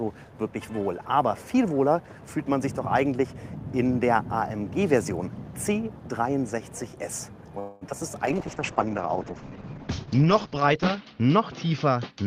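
At 7.59 s the audio stops moving forward and the last sound is drawn out as a fading, buzzy continuation lasting until 7.96 s, about 220 ms of filled-in sound. This is a call audio freeze, most likely packets stalling in transit so the jitter buffer ran dry and the receiver had to extrapolate. When delivery resumes, playback picks up where it left off, so nothing is lost, but a gap has been inserted and the delay grows by about 220 ms.

Inside that stretch, from 7.89 to 7.92 s, there is a short concealed packet loss. About 20 ms of audio never reached the decoder in time, and only a few milliseconds of it were covered by continuing the preceding sound before blending back. It registers as a brief smear or wobble.

From 8.27 s to the end, a call bitrate drop takes the encoder from 32 to 8 kbps after the bandwidth estimate fell. The codec quantises far more coarsely and narrows the audio bandwidth from 20 kHz to 8 kHz. 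The sound becomes muffled and rough, with a watery texture, and it sits at the lowest rate for about 2.4 s.

Between 12.11 and 12.26 s a jitter buffer speed-up shortens the audio. The buffer was holding more than its target, so the receiver cut repeated pitch-period-sized pieces, around a tenth of a second in total. Playback runs at roughly 154% speed while the pitch stays the same, giving a hurried quality at the very end.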